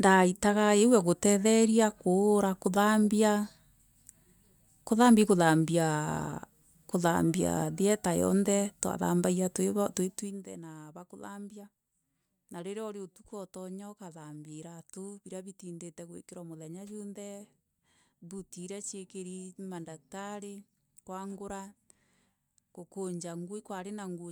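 No technical faults are audible.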